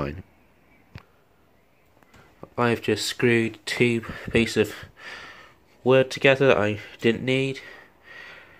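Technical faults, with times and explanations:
Nothing here stands out as a technical fault; it all sounds fine to my ear.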